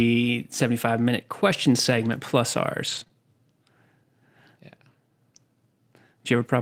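Lost packets rebuilt from error correction, 1.85–2.15 s just after "minute question" and 2.87–3.01 s: missing speech was replayed from low-bitrate backup copies, leaving about 160 ms and 80 ms sounding rough and noisy.

Short concealed packet loss, 3.03–3.07 s and 3.07–3.11 s: two roughly 20 ms holes arrived too late and were filled by extending the preceding sound, giving a brief smeared wobble.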